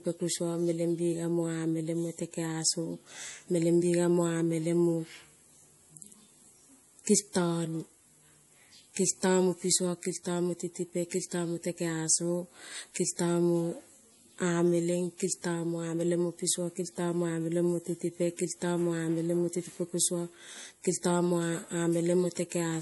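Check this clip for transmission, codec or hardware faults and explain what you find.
There is one codec fault, and it runs through the whole speech clip. It is MP3 compression damage, and it is plainly audible. Nothing is left above about 11.5 kHz, so the top of the band is sliced off flat. Starved of bits, the encoder has thrown away quiet frequency detail. Those parts blink in and out from frame to frame. This gives a watery, swirling texture, with chirpy s sounds and smeared onsets. The likely cause is a low-bitrate encode, which fits around 48 kbps.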